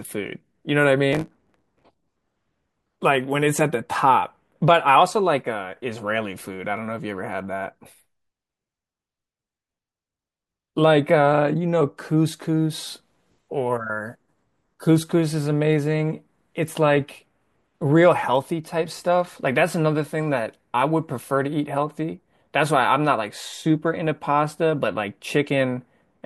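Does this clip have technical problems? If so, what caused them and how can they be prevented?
Yes. From 1.12 to 1.86 s there is a block size mismatch (truncated): one stage delivers bigger blocks than the following stage accepts, so each block's tail is dropped. The result is a 109 Hz buzz, with speech hurried to 1.09 times speed at near-normal pitch. Matching block sizes across stages, or buffering the surplus rather than discarding it, prevents this.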